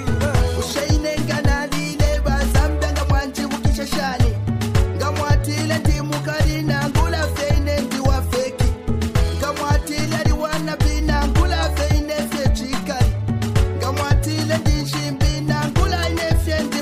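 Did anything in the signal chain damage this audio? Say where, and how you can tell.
Yes. At 2.15 s there is a corrupt frame decoded by the codec: a brief chirp or blip that doesn't belong to the surrounding sound. Flipped bits in the compressed data made the decoder misread gains and spectral codes for what sounds like a couple of frames, placing energy at wrong frequencies. On a spectrogram it appears as a short, sharp-edged patch of misplaced energy; on the waveform, a brief disturbance peaking around -20 dBFS.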